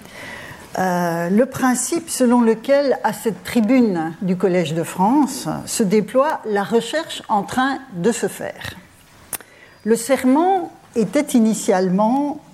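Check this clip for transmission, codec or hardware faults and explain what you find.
One fault is present: word clock ticks. From 0.44 s to 12.17 s, sharp ticks of uneven strength recur about every half second, roughly twenty in all. The receiving device runs on its own clock, apparently off by around 40 ppm. Each slip drops or repeats one sample.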